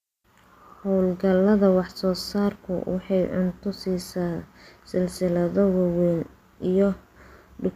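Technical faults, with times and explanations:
No technical faults are present; the speech signal comes through intact with no audible disruption to its level, timing or frequency content.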